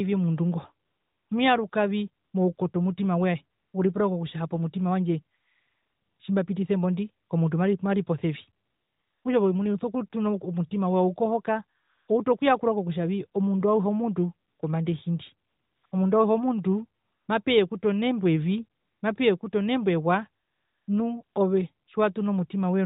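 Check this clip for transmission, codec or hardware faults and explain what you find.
One fault recurs throughout: AMR comfort noise, in 18 pauses from 0.86 s (after "omundu ngo") to 21.87 s, lasting 20 ms to 0.82 s (longest 5.38 to 6.20 s). The sender stopped speech frames and the receiver synthesised a smooth, steady hiss in place of the real background. On a spectrogram, flat featureless noise patches appear, with abrupt edges. The narrowband codec path itself, at 12.2 kbps, shows its 4 kHz band ceiling and only light codec damage.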